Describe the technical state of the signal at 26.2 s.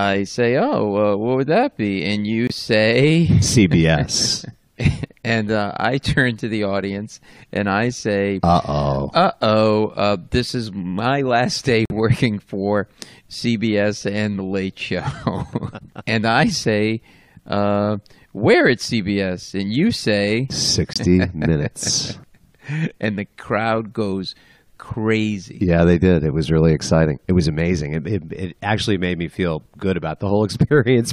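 Around 26.2 s the audio is intact; no dropout, distortion, glitch or other fault can be heard at that point.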